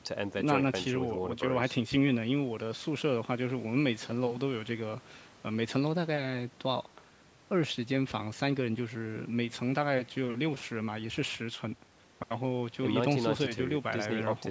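No technical faults occur in this speech at any point, so there is nothing to describe in time order.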